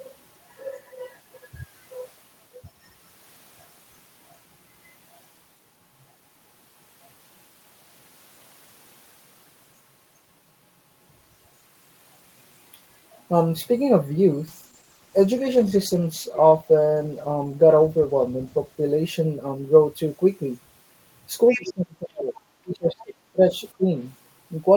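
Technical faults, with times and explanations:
14.49 to 19.41 s, call bitrate drop: the encoder's rate falls from 32 kbps to 13 kbps and stays at its lowest for about 4.1 s. The speech turns coarse and watery, and the top end dulls because the codec stops spending bits on high frequencies. On a spectrogram the upper bands thin out or vanish above a lowered ceiling, with blotchy, smeared detail below. The waveform's envelope stays much the same, so the damage shows mainly in the spectral view.
21.48 to 21.72 s and 22.99 to 23.03 s, other side's voice leaking through: a second voice sits under the talker, about 10 dB below the speech in the first stretch and only a faint scrap about 30 dB down in the second. This is likely loudspeaker playback that the echo canceller failed to remove from the microphone. A spectrogram shows a separate set of harmonics not aligned with the talker's pitch, and the waveform shows low-level activity added beneath the main signal.
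21.52 to 22.36 s, 22.63 to 23.50 s and 23.77 to 23.97 s, speech suppressed in double talk: the talker's level dips sharply and in pieces, by about 35 dB, about 25 dB and about 20 dB at the deepest point of each run. The likely cause is the echo canceller clamping down while both sides spoke at once, because it could not tell the talker from the far-end echo. On the waveform the envelope caves in abruptly. On a spectrogram the energy drops out in patches.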